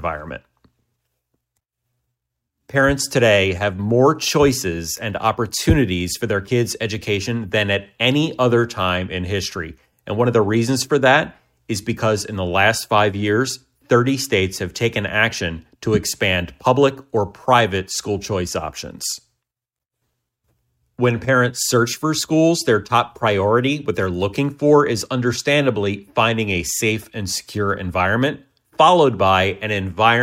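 No technical faults can be heard anywhere in the signal, which holds steady with no breaks, level jumps or other disturbances.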